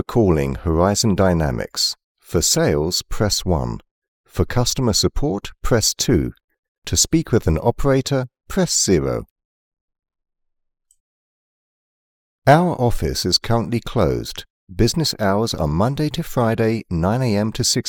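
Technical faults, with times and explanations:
On listening, nothing in the audio stood out as a technical problem.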